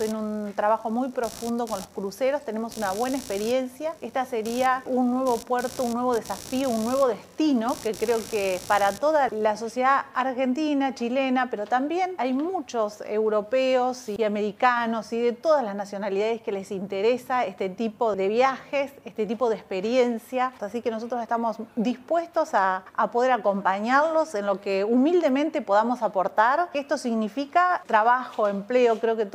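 From the start to 9.46 s, a computer activity noise sits under the sound. It is a buzzing, chirping layer pulsing at around 70 times a second. It stays roughly 20 dB below the sound. It does not follow the sound's own rhythm. It tracks the computer's workload instead. Changing load on the processor or graphics hardware pulls on the ground the audio circuit shares, and that disturbance leaks into the signal.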